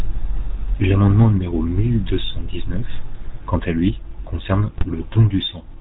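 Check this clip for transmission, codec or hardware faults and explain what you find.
Two faults are audible: a codec colouring the whole clip and a short burst of transmission damage near the end.

Throughout, the speech has a buzzy, gravelly roughness and nothing above 4 kHz, plainly audible damage typical of the GSM full-rate codec at 13 kbps. It models the vocal tract and rebuilds the excitation from sparse, regularly spaced pulses, so fine detail collapses into buzz.

From 4.72 to 4.93 s the speech breaks into squawks, pops and gargling: GSM bit errors. Corrupted bits reach the decoder's filter, pitch and gain values, warping the spectrum or jolting the level frame by frame across a stretch of 11 frames.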